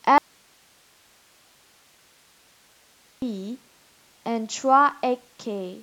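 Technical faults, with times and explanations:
0.18–3.22 s: audio dropout to a faint residue. The speech cuts out abruptly for about 3 s, leaving only hiss roughly 35 dB down, likely a lost signal feed with the downstream path still live.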